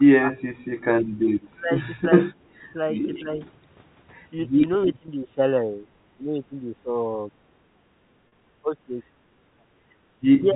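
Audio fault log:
0.00–0.31, 1.52–2.03, 2.60–2.67, 3.21–3.39, 4.86–7.31, 8.61–8.97, 10.37–10.55 s: speech suppressed in double talk. An echo canceller likely mistook the near talker for loudspeaker echo while both sides spoke and turned the signal down. The sound dips by roughly 5 to 25 dB in pieces, longest through 4.86–7.31 s, about a second and a half in all.
4.85–4.89 s: echo leak. The far end's echo canceller likely left part of its loudspeaker pickup in place and sent it back. A brief scrap of the audio returns about 324 ms late, about 15 dB down, as a faint copy.
5.06–5.08 and 8.28–8.32 s: packet loss with pitch repetition. Lost packets of 20 ms and then 40 ms were bridged by repeating the last pitch period and fading it, so each gap becomes a short held buzzy tone over the telephone-band G.711 sound before the audio resumes.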